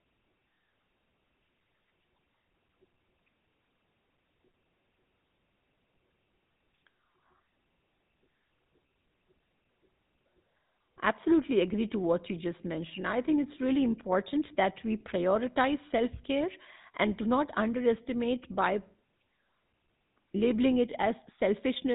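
Throughout, the speech carries GSM full-rate codec damage, consistent with 13 kbps. Pulse-driven coarse excitation gives a buzzy, gravelly roughness, and nothing passes above 3.8 kHz.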